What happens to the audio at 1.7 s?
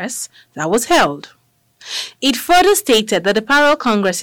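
At 1.7 s the speech is hard clipped, as it is throughout. Driven roughly 16 dB past full scale, around 7 percent of samples hit the ceiling and are flattened, giving harsh fuzz on loud syllables. The waveform shows squared-off peaks, and the spectrogram shows dense harmonic smearing up to the top.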